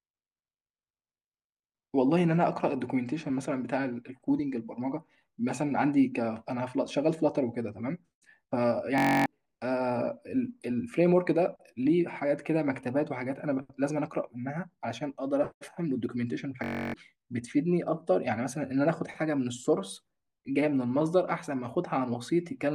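At 8.98 to 9.26 s and again at 16.64 to 16.94 s, the speech gives way to a system hang loop. The system froze while playback kept repeating one 21.33 ms slice, which fits a 1024-sample buffer. It sounds like a steady 46.9 Hz buzz, and about a third of a second of speech is lost each time.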